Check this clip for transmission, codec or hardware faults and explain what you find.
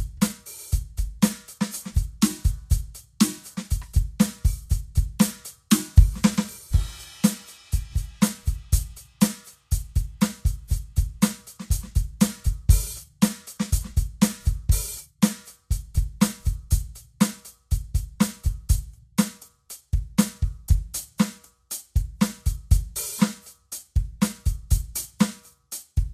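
One codec fault runs through the whole of this music clip.

Vorbis compression, throughout: the damage is plainly audible and is likely the work of a Vorbis encoder at low quality, at a setting that fits a bitrate of around 34 kbps. The encoder draws a smooth spectral envelope and spends very few bits on the detail riding over it, so nothing survives above 14.2 kHz and the remaining treble turns into grainy hiss. Sustained tones sound roughened and attacks lose their crispness.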